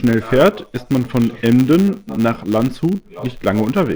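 The filter restarted on every block throughout, losing its state, so a 100 Hz buzz tracks the speech level; the waveform shows spikes every 10 ms.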